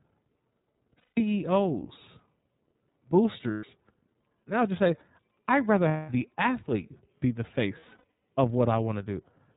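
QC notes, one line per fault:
throughout: iLBC codec. Everything above 4 kHz is gone, so the speech sounds boxed in and a touch rough and synthetic. The damage is plainly audible. The grain fits iLBC's 13.33 kbps mode with 30 ms frames, each coded on its own.
0.99–1.18 s: lost iLBC frames. About 180 ms drops out and the decoder covers it by repeating the last pitch cycle with noise mixed in, giving a held, slightly buzzy vowel that fades. This fits six missing 30 ms frames.
3.51–3.64 s: lost iLBC frames. A shorter 120 ms gap gets the same treatment: a brief buzzy, breathy hold instead of real speech. The speech snaps back right after because each frame decodes independently. This fits four lost frames.
5.88–6.09 s: lost iLBC frames, right after "just say I'd rather" and before "the athlete be the". About 210 ms is replaced by a smeared, fading vowel-like drone, which fits seven dropped frames. 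The voice is right again almost immediately.
7.80–8.04 s: lost iLBC frames, just after "the athlete be the". This time the losses are scattered across roughly 420 ms, with the longest run only around 70 ms. You hear several short buzzy patches stuttering through the speech rather than one long hold.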